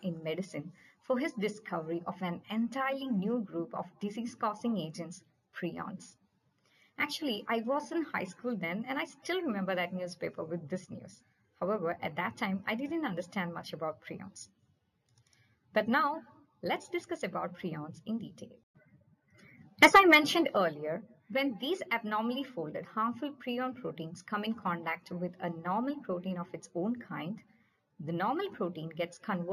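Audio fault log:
throughout: imaging from linear upsampling. Straight-line interpolation raised the sample rate, which fits a 16 kHz source brought up to 48 kHz. The top end is dulled, and a faint mirror image roughly 30 dB down fills 8 to 16 kHz, giving bright sounds a metallic shimmer.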